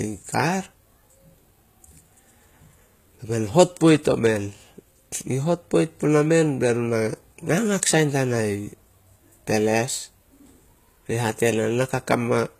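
Speech throughout has gritty, metallic s sounds and synthetic-sounding treble ending at 14.9 kHz, likely HE-AAC compression rebuilding the highs by band replication.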